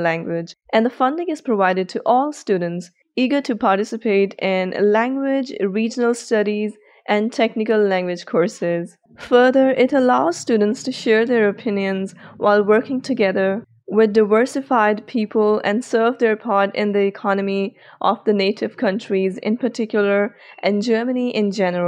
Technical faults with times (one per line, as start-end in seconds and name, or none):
none